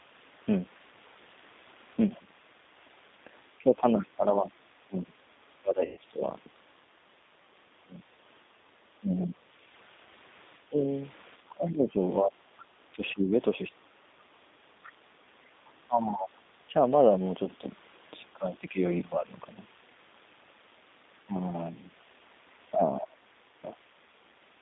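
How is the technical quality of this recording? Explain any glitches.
The recording is clearly degraded: a low-bitrate speech codec colours the whole clip, the talker is repeatedly turned down while the other party speaks, that other party leaks faintly through twice, and one short packet dropout occurs.

The G.729 codec, running at 8 kbit/s, affects the entire clip. It does not store the waveform. It transmits a vocal tract filter, a pitch predictor and a few pulses per frame, and the decoder rebuilds speech from these. The line band covers only 200 Hz to 3.7 kHz, so the speech sounds narrow and muffled. The codec damage is plainly audible as a rough, slightly synthetic grain on every syllable.

Speech suppressed in double talk occurs from 2.14 to 6.22 s, 8.99 to 13.95 s, 15.87 to 18.81 s and 21.25 to 23.68 s. The likely cause is an echo canceller that could not separate the talker from loudspeaker echo while both sides spoke, so it attenuated everything. 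In each of the first two spans the voice drops by up to about 25 dB for roughly a second and a half in total. In the last two the drops reach about 20 dB, lasting around a second and under a second respectively. The result is dips and choppy gaps.

The other side's voice leaking through appears as a faint second voice from 3.98 to 4.05 s, about 20 dB below the talker, and again from 12.62 to 15.7 s, about 25 dB down. The likely cause is that the talker's device plays the far end on a loudspeaker and the echo canceller leaves residue in the microphone signal. The brief scrap and the longer stretch both sit beneath the main speech.

VoIP packet loss concealed by the speech codec occurs from 5.85 to 5.98 s, where about 120 ms of audio went missing, which points to a run of several consecutive lost packets. The decoder filled the gap by extrapolating from its last pitch and filter settings while lowering the gain, so the sound smears into a fading buzz or coloured noise. 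Because each frame builds on the previous one, the voice stays weak or distorted for tens of milliseconds or more after packets resume.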